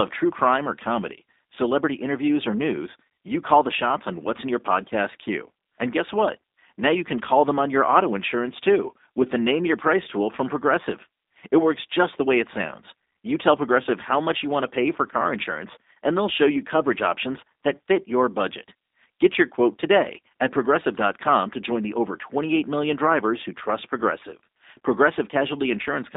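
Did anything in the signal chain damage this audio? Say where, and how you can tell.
Yes. G.729 codec damage runs through the whole clip, at the codec stage. The speech is confined to a telephone band of roughly 250 Hz to 3.7 kHz, with nothing above it. The speech has a plainly audible rough, synthetic edge, which fits an 8 kbit/s coder of the G.729A kind. Each 10 ms frame is rebuilt from a vocal tract filter, a pitch predictor and a handful of pulses rather than the original waveform.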